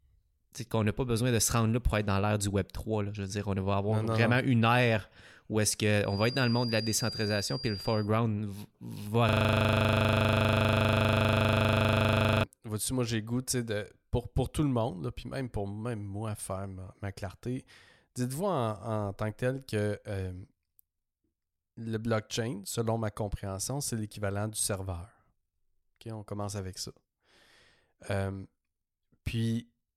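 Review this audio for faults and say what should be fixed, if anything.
Feedback whistle, 6.00 to 8.11 s: a thin, steady 4.8 kHz tone sits about 10 dB below the speech, swelling and fading slowly. It is likely a loudspeaker-to-microphone loop held just at the edge of feedback. Lowering monitor gain, moving the microphone off the speaker's axis, or notching 4.8 kHz would prevent it.

System hang loop, 9.29 to 12.44 s: one 40 ms slice of audio repeats exactly, producing a steady 25 Hz buzz. The driver froze while the hardware kept replaying its ring buffer. Updated audio drivers and less CPU contention during recording would prevent it.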